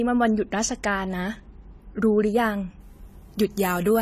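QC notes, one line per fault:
throughout: AAC compression, by the sound of it. The damage is plainly audible, the top end stops dead with nothing above 14 kHz, and the speech comes across dull and smeared. That's likely an AAC-LC encode at a low bitrate, something like 32 kbps. At that rate the encoder doesn't have enough bits for every frequency band, so it drops the highest ones and codes the rest coarsely, which smears the detail.
2.81 to 4.02 s: pre-emphasis left on. For the last stretch of the clip the treble jumps up and the speech turns thin, bright and sibilant. The shape fits the FM 75 µs curve, with about 14 dB more at 10 kHz than at 1 kHz. Someone boosted the highs for transmission and the matching de-emphasis cut never got applied, so the lift stays in the signal.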